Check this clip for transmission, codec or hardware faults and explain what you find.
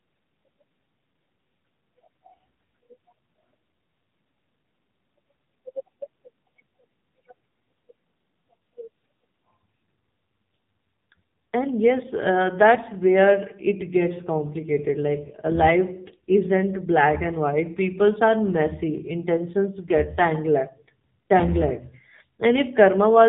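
There is one codec fault, present for the whole clip. AMR narrowband mobile codec, throughout: a low-rate vocal-tract model, likely near 6.7 kbps, makes the speech buzzy and synthetic. The spectrogram shows nothing above 3.8 kHz.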